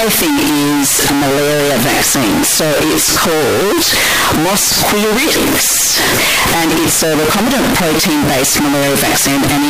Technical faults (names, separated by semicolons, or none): float read as integer